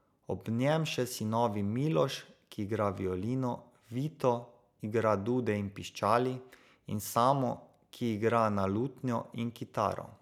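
No technical faults can be heard anywhere in this speech recording. There is nothing here that calls for a time stamp or an explanation.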